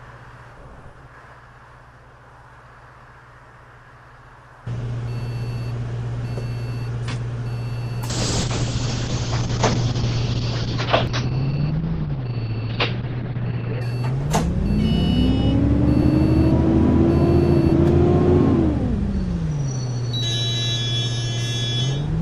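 From 8.11 to 13.87 s a call bitrate drop sets in: the audio band collapses from 20 kHz to about 6 kHz, and the sound turns muffled, rough and watery, consistent with the encoder running near 7 kbps. It stays unbroken, unlike packet-loss gaps, then recovers.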